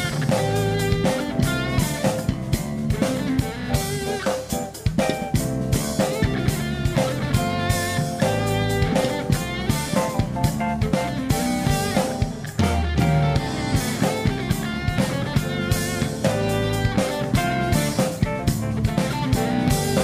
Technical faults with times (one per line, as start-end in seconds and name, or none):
none